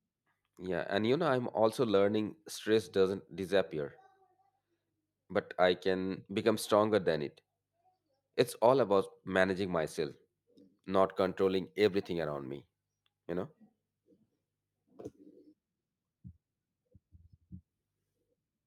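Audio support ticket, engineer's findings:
Sample clock jitter, 11.08 s to 17.47 s. Hiss and grit riding on the speech, strongest on loud and bright sounds, gone in pauses. Probable component: ADC/DAC clock. Timing wander of a few microseconds, error roughly 35 dB under signal. Unlike a fixed noise floor, it scales with waveform slope and never sits in the silences.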